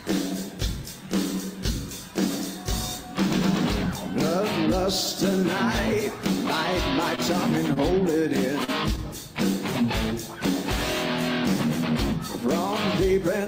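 At 7.15 to 7.21 s and again at 7.74 to 7.79 s there is a short stall from a late packet: the jitter buffer ran dry and the receiver held the last sound for about 24 ms and 22 ms until data arrived, adding equal delay and losing nothing, heard as a slightly stretched, faintly buzzy moment. At 8.64 to 8.71 s a short concealed packet loss appears: 40 ms never reached the decoder, and 37 ms of synthesized continuation covered the gap, giving a brief smear before the real audio resumes.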